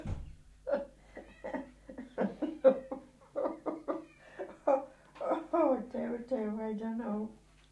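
No technical faults are audible anywhere in the recording.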